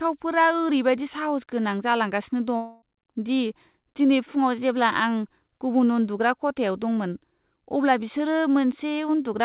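A long network dropout runs from 2.56 to 2.84 s. For roughly a quarter of a second the speech stops being real and turns into a buzzy continuation of the last sound, fading as it goes, because the receiver is stretching what it already had to cover missing audio. There is no fully silent stretch. The speech then resumes, with the lost part simply gone. The likely cause is a break in packet delivery on the G.711 call path, whose band stops at 4 kHz.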